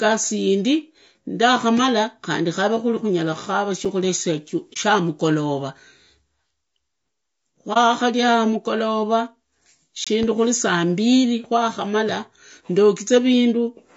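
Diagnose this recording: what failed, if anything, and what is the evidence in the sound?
At the codec stage, the speech has likely passed through low-delay AAC compression, AAC-ELD, at a bitrate that fits around 32 kbps. Its short frames resolve the pitch harmonics of the voice poorly, and at this rate there are too few bits to code them cleanly. The damage is plainly audible throughout. Voiced sounds come out rough and grainy, noise fills the gaps between harmonics, and the top band sounds thinned or synthetic.

The driver or buffer stage most likely twice failed to fill the output in time, leaving a block of digital silence. The first comes right after "khukhaveku kuri khunyala khakara" at 3.85 s. It lasts about 5.8 ms, which fits one 256-sample buffer, and it is heard as a tick. The second runs from 10.04 to 10.07 s, about 22 ms, just before "khuri saa mbili kwakhamara". It is heard as a short hole. 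Both edges switch hard to zero with no fade.

At the network or decoder stage, frames went missing, and the decoder zeroed their spectrum. This is AAC frame loss with muting. It shows up at 4.73 to 4.77 s and again at 7.73 to 7.77 s. Each dropout points to a single lost frame of about 30 ms. The overlapping windows spread each mute to roughly 40 ms, with a gentle fade out and back in. The result is a brief dip, which sets it apart from the hard silences.

In the analogue wiring, a sudden voltage step or pulse, likely from a plug, switch or static discharge, added a loud pop from 10.23 to 10.26 s. That is shortly after the second silent block and just before "khuri saa mbili kwakhamara". It is a single sharp pop, peaking about 5 dB above the speech. The speech carries on underneath it rather than dropping out.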